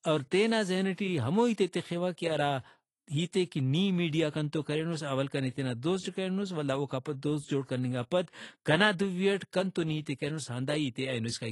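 AAC compression damage runs from start to finish: nothing is present above 11.5 kHz, and the speech sounds dull and smeared, with a watery, fizzy edge on sibilants and held vowels. The likely cause is AAC-LC coding at a low rate, one that fits roughly 32 kbps. At that rate the encoder lowers its cut-off, discards spectral detail the hearing model rates as masked, and leaves gaps that shift from frame to frame, producing the audible warble.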